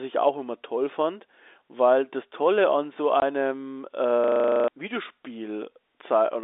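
At 3.2 to 3.22 s, right after "an so", the speech drops into a hard 20 ms hole. This is packet loss filled with silence: one lost packet's worth of audio, which fits a single 20 ms packet, replaced by silence. Unlike concealment, nothing is smoothed or repeated; the gap is simply dead.

From 4.24 to 4.68 s, a system hang loop takes over. The host stalled while the audio hardware kept replaying the same 40 ms of buffer about eleven times, so roughly 0.4 s of real speech never arrives. At a 25 Hz loop rate it sounds like a rough, rattling buzz rather than a silent gap. The identical repetition tells it apart from packet loss.

Through all of this, the G.711 telephone coding keeps the narrow 300 Hz to 3.7 kHz line band.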